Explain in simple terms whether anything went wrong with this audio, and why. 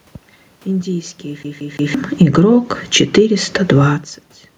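From about 2.35 to 3.73 seconds, the voice and the room noise behind it slowly swell louder together, as if someone were turning up a volume knob over more than a second. This is automatic gain rising: the system judged the input too quiet and gradually raised its own volume boost. Because it boosts everything it hears, the background noise grows along with the voice. The level changes near 1.5 and 4 seconds come from the talker moving relative to the microphone.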